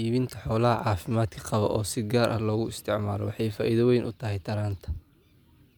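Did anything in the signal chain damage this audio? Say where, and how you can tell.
No, nothing in this speech stood out on listening as damage from any stage of the signal chain.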